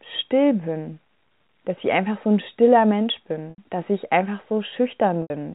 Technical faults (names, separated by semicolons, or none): packet loss with pitch repetition